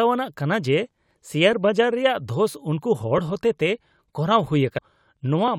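A speech clip, and from about 1.53 s to 5.48 s there's a regular tick every 1.65 s or so, a handful of them in all, each a small click where a short block of samples, something like 50, gets dropped or doubled. That steady spacing is the giveaway for clock drift buffer slips: the two ends are likely running on separate clocks that disagree by several hundred ppm, so the buffer between them creeps full or empty until it has to jump. Separately, at 4.77 s the sound lurches forward with a quick blip, like a chunk of the programme just isn't there. That's a skipped stream segment: one piece of the segmented stream likely never loaded, and the player carried on from the next one, so the audio jumps ahead mid-flow.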